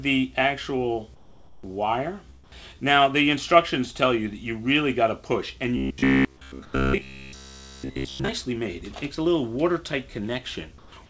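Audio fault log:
1.15–1.63 s, 2.44–2.52 s, 6.65–6.73 s and 10.78–10.92 s: comfort noise in place of the background. In pauses where the background sits about 25 to 30 dB below the loud parts, the real ambience gives way to a smooth, featureless hiss lasting 480, 80, 80 and 140 ms. It is about 4 dB quieter in the first three and about 1 dB quieter in the last. The likely cause is discontinuous transmission, with the receiver synthesising shaped noise while the sender stays silent. Unlike a dropout, the gap is filled rather than silent. Unlike a noise gate, the hiss holds steady instead of cutting to nothing.
5.77–8.29 s: robotic sound from repeated short buffers. For about two and a half seconds the audio becomes a rigid, metallic buzz at 66.8 Hz. That pitch fits a chunk of roughly 15 ms being replayed over and over, and all of the stretch is made of these repeats rather than fresh audio. 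The likely cause is audio reaching the jitter buffer too seldom. Unlike a pitch shift or ordinary codec coloration, the fixed buzz ignores the sound's own pitch while still loosely following its shape.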